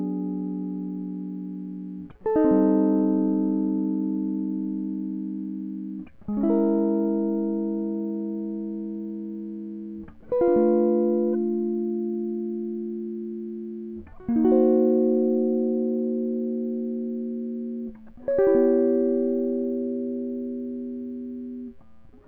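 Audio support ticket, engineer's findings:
Resampler restarted on every block, throughout: 20 Hz ticking under the music. Each 50 ms block converted 48 kHz to 44.1 kHz alone, leaving an error at every edge.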